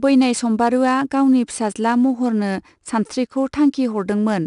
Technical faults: 4-bit ADPCM compression

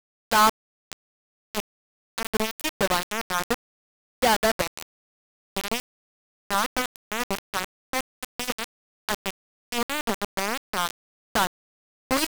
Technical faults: low bit depth without dither

